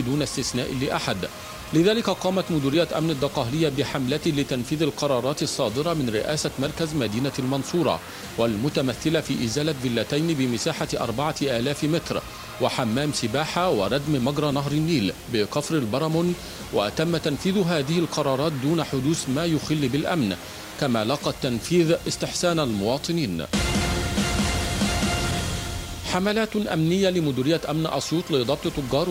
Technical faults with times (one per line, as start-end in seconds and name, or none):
0.00-29.10 low bit depth without dither